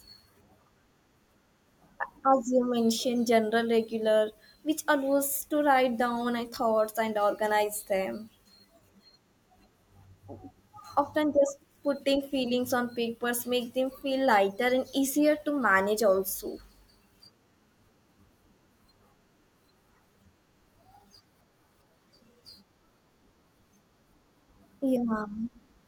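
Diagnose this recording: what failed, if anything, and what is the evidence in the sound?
Nothing in this speech recording points to a failure at any stage of the chain. Listening through, there is no event or irregularity that would mark a breakdown in capture, conversion, transmission or playback.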